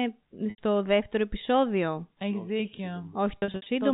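At 0.50 to 0.58 s, just before "δεύτερο επεισόδιο", packet loss with pitch repetition fills an 80 ms gap, which fits four 20 ms packets, by looping the last pitch period into a briefly held buzz. From 3.38 to 3.66 s, shorter losses scattered across 280 ms, the longest 60 ms, give repeated buzzy stutters.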